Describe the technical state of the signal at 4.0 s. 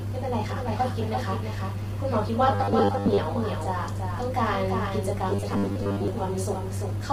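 At 4.0 s, as across the whole clip, a doubled audio track is heard: a second full-band copy of the speech trails about 300 ms behind and about 5 dB quieter, likely from a second, slower capture path. Unlike echo or reverb, the copy is a single clean repeat, with no decay or room colour.

The same moment also carries heavy low-delay AAC compression, likely AAC-ELD at a low bitrate around 24 kbps. Each frame codes only a limited set of frequency lines, so the speech sounds rough and grainy, with noise filling the gaps between harmonics and a lowered or synthetic-sounding top band, rather than broadband hiss or dropouts.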